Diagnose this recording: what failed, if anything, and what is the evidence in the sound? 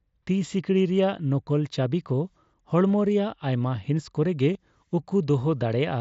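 Concealed Bluetooth headset packet loss occurs at 2.89 s and again at 4.54 s, in the wireless link between headset and phone, which carries mSBC wideband audio. The gaps last about 7.5 ms and 15 ms, which fits one and then two lost codec frames. The receiver filled each hole by repeating the best-matching recent stretch of waveform, so the first is nearly hidden and the second is a brief buzzy patch with a small warble where real audio returns.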